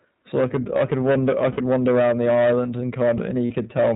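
From start to finish the speech shows hard clipping: it is driven about 12 dB past what the stage can pass, so around a tenth of the waveform is sliced flat. The result is a harsh fuzz on every loud syllable. Unlike codec roughness, it rises and falls with level.

The speech also passes through the iLBC codec, and its damage is plainly audible. Nothing above 4 kHz survives, and the voice has a slightly synthetic, grainy texture even on quiet passages. That steady band-limited character sets it apart from the level-dependent clipping fuzz. The coding likely uses the 20 ms frame mode.

Lost iLBC frames occur at 1.52–1.59 s (about 60 ms) and 3.46–3.52 s (about 40 ms). Each loss fits two or three missing 20 ms frames. The decoder fills each gap by repeating the last pitch cycle with noise, so the gap is a brief held, buzzy vowel rather than silence. Normal speech returns almost at once afterwards.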